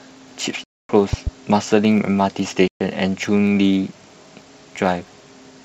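A steady buzz at about 92 Hz runs under the whole speech recording. This is a block size mismatch (truncated): one stage hands over longer blocks than the next reads, so the tail of each block is dropped and a discontinuity repeats at the block rate, with pacing and pitch essentially unchanged. The sound cuts abruptly to dead silence twice: a 256 ms hole from 0.64 to 0.89 s and a 128 ms hole from 2.68 to 2.80 s. These are blocks of digital silence, where zeros replaced the audio, most plausibly because the output buffer wasn't filled in time. Their lengths fit 4096- and 2048-sample blocks. Between 1.13 and 1.30 s, two sharp loud pops land on top of the speech, roughly 10 dB above it, while the speech carries on underneath. A sudden voltage spike from a plug, switch, static or driver glitch is the likely cause.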